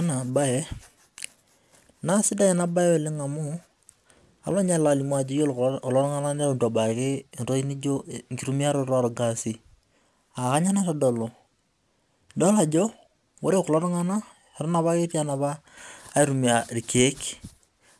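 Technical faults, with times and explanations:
Throughout: aliasing. The speech was downsampled without an anti-aliasing filter, so content above a 12 kHz fold point, which fits a 24 kHz rate, mirrors back as unrelated tones roughly 25 dB below the signal, making sibilants gritty and metallic.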